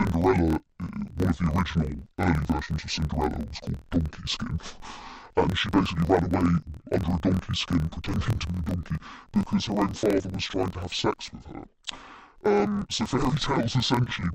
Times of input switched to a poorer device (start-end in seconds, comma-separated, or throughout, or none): none